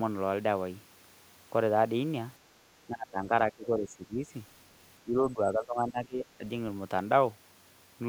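At 2.87 s the speech sinks, roughly 20 dB down, and stays buried until 3.32 s. It dips again from 3.51 to 4.28 s and from 5.03 to 6.44 s, both times by around 15 dB. That pattern is most likely speech suppressed in double talk: with both ends talking at once, the echo canceller mistook this side for loudspeaker echo and pulled it down.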